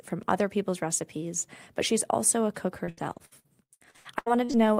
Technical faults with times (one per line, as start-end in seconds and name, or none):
2.85-4.55 repeated packet loss (robotic sound)